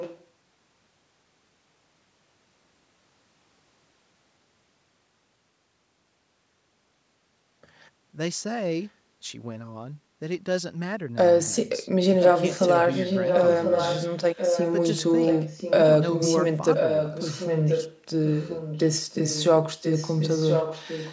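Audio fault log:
0.0–0.25 s, 12.21–12.63 s, 12.95–15.73 s, 16.09–19.51 s and 19.82–21.13 s, echo leak: an echo canceller on a loudspeaker end likely failed to strip out what its microphone picked up, so the far side's audio returns about 1.03 s late. The opening scrap is faint, well under the speech. At 12.21 s it is as loud as the speech, and after that it stays only a little quieter, so overlapping delayed copies blur the talking until the end.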